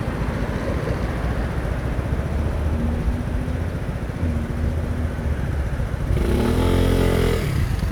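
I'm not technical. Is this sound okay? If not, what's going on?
Yes, the sound is okay: nothing in the recording points to a technical problem anywhere along the way.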